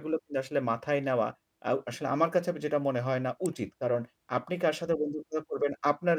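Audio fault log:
3.46 s electrical switching spike: a nearby switch, motor or static discharge likely threw a brief arc that the audio line picked up. This lays one sharp snap over the speech, peaking at about -20 dBFS and gone within a millisecond.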